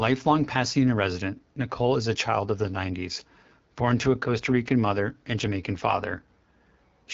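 Throughout, the speech carries AMR wideband (HD Voice) codec damage: a raspy, rough texture that fits the low 8.85 kbit/s mode, where the model's pulse excitation is coarsely coded. A spectrogram shows smeared harmonics, a noise-filled band above 6.4 kHz, and nothing above 7.6 kHz.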